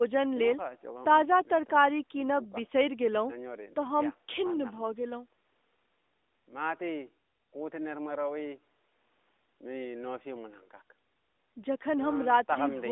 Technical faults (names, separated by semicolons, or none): none